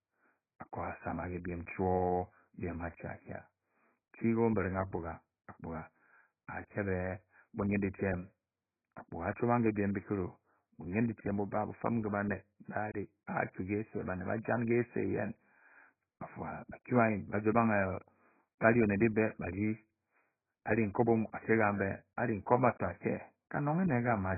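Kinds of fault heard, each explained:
AAC compression: The speech sounds dull and muffled throughout, with nothing above 2.5 kHz and a heavy warbling smear. The likely cause is low-bitrate AAC-LC coding, pointing to roughly 12 kbps, where the encoder drops the top band and coarsely quantises what remains.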